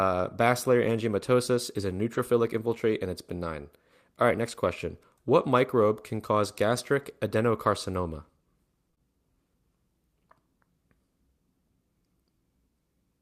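At 2.13–2.19 s, between "basilar angiomatosis is a" and "infiltrate and", and again at 6.75 s after "microbe can cause", lost packets were rebuilt from error correction. About 40 ms and then 20 ms play from the low-bitrate copy carried in the next packet, so nothing drops out. Those moments just turn briefly rough and noisy.

From 8.91 to 9.02 s comes short concealed packet loss, three consecutive 20 ms holes. With no backup copy, the decoder extended the preceding sound, which causes a smeared wobble rather than a grainy patch.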